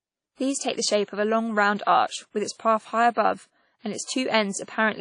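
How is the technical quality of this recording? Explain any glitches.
The quality is compromised by plainly audible codec damage across the whole clip. From start to finish the speech sounds ringing and washy, with a hiss that swells and fades with the signal and nothing above 10.1 kHz. This is likely WMA compression: its long transform blocks smear quantisation noise over tens of milliseconds and zero out weak components, which fits a low bitrate around 32 kbps. The breathing hiss sets it apart from a simple low-pass filter.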